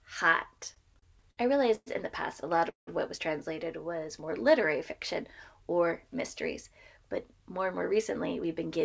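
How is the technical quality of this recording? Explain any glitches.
The recording has several timing glitches from a network call path: a stretch of stutter, two freezes, one slowed passage and one hurried one. The audio stops at 8 kHz, which fits a wideband call codec such as G.722.

Repeated stalls (stutter), 0.52 to 1.39 s: the sound catches eight times in quick succession. The longest hold is 60 ms, and about 17% of that span is filled in. Each time, packets arrived too slowly, the jitter buffer ran dry and the receiver extended the last sound. Nothing is lost, but the passage drags. Unlike a freeze, this is a chain of short hitches rather than one break.

Call audio freeze, 1.75 to 1.88 s and 2.70 to 2.89 s: each is a single held moment, 112 ms and then 176 ms long. The sound smears on and fades, to near silence for 30 ms in the first and 130 ms in the second. The likely cause is packets held up in transit, which emptied the buffer. 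Playback then resumes where it stopped, so a gap is inserted but nothing is skipped.

Jitter buffer slow-down, 4.00 to 4.44 s: the audio runs at 91% speed with unchanged pitch. Sounds are drawn out, adding 46 ms, because the receiver repeated single pitch periods to rebuild its reserve. There is no break or fade here, only stretching.

Jitter buffer speed-up, 6.68 to 8.77 s: the sound runs about 6% fast at the same pitch and feels hurried. Around 150 ms was trimmed in small pitch-period pieces to shed excess buffered delay. This is the mirror image of the slow-down.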